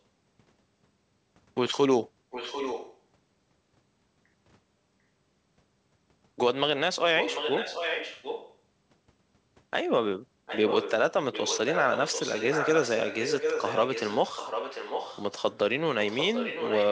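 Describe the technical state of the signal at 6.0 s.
At 6.0 s the speech signal is intact, with no fault present, just the normal band limit of a wideband call path that leaves nothing above 8 kHz.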